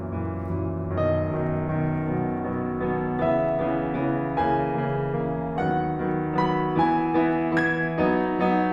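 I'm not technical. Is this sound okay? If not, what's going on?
No. From 0.15 s to 8.64 s the music carries clock slip clicks, faint ticks roughly ten times a second. They are likely caused by two devices running slightly different clocks, so a sample slips now and then. Random crackle comes irregularly, but these stay evenly spaced.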